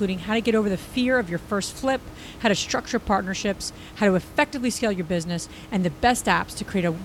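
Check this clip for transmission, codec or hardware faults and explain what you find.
Nothing stood out on listening to this speech recording, apart from the room's own background noise, which sits about 18 dB below the speech and belongs to the recording itself.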